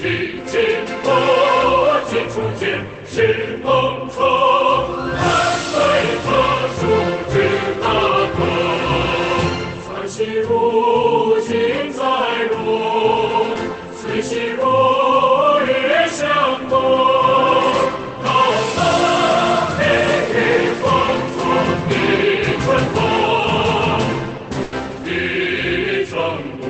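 At 24.63 s, a burst of packet loss holds and fades the last sound for 90 ms, then skips 80 ms ahead, unlike a silent dropout.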